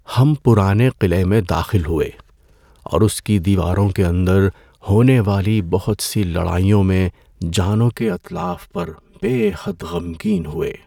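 From 7.97 s, right after "سی لڑائیوں میں جانوں", channel delay (comb filtering) sets in and lasts to the end. One channel runs about 5 ms late. Summed to mono, the speech cancels at evenly spaced notches from around 100 Hz. It sounds hollow and phasey.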